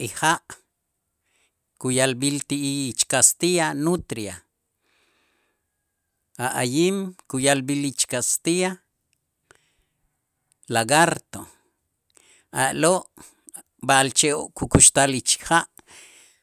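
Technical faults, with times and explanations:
Nothing in this speech recording stood out as a technical problem on listening.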